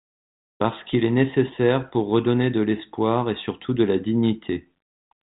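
Speech, with no technical faults to report.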